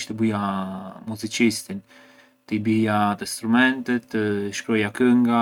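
No technical faults are audible anywhere in the recording.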